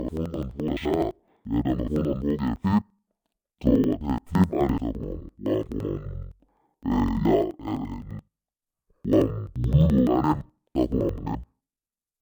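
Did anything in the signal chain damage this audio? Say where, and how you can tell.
Yes. The damage sits at the sample-format conversion stage: interleaved audio read as planar, throughout the clip. The speech plays an octave low, doubled and choppy, with a flutter at about 11.7 Hz. That rate fits blocks of about 85 ms, which points to a 4096-sample buffer. Each block's alternating left and right samples were split into halves. Both halves play at half speed, side by side. So pitch drops 12 semitones while the pace stays right.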